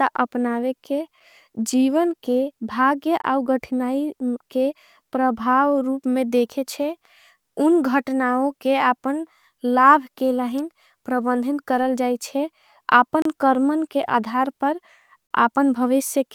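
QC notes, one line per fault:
1.20, 3.22–3.24, 13.22–13.25 and 15.27–15.31 s: gap between stream segments. Hard-edged silent holes of 4, 19, 31 and 37 ms, after "अपनावे के" and before "रमन के". They fall where 2 s segments join. Unlike a dropout, no audio goes missing; timing simply stretches.
10.58 s: electrical switching spike. A sharp snap lasting about 8 ms sits between "लाभ के" and "प्रबंधिन करल जाएचे". Unlike a segment gap, it adds a burst on top of the sound rather than silence. The likely cause is a nearby switch arcing into the line.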